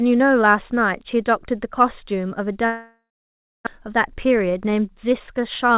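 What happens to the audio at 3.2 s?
At 3.2 s the sound is in the middle of a long network dropout running from 2.66 to 3.69 s. This is likely a stall in packet arrival. The receiver stretches the last sound into a fading buzz, then leaves silence for about 0.6 s. Roughly 0.6 s of audio never returns, and timing slips by around 0.4 s. On a waveform, the envelope decays to a flat line. A spectrogram shows smeared bands fading to blank below the 4 kHz call-codec ceiling.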